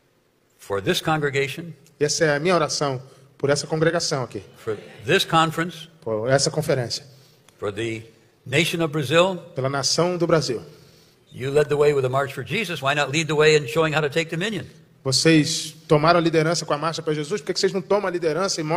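No technical faults can be heard anywhere in the recording, and the signal holds steady throughout.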